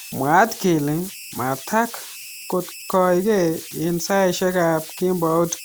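Right from the start and running the whole way through, there are converter idle tones. The delta-sigma converter seems to have had no dither, so whenever the speech gets quiet its modulator settles into repeating bit patterns. Those come out as a thin whistle somewhere around 3 kHz, plus a gritty layer of noise under the softer syllables, sitting only about 17 dB below the speech itself.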